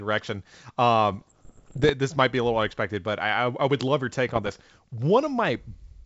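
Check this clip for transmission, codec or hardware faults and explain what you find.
Two bursts of bit errors on an ADPCM link affect the speech, over a G.722 wideband channel whose band-limited sound carries little codec damage of its own. The first runs from 1.12 to 1.90 s, ending just before "this might be a". The second runs from 4.34 to 4.56 s, just after "would love your take". The sound points to an error rate of roughly 0.7 percent, about one bit in 140. Each flipped bit throws off the decoder's step size and predictor, so the error rings on for milliseconds. The result is pops, gritty bursts and brief jumps in level. A waveform shows spikes and jagged amplitude steps, and a spectrogram shows scattered broadband vertical streaks.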